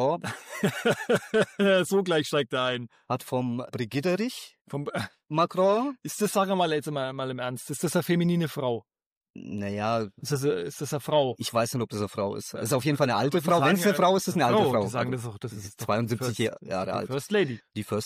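No technical faults are audible.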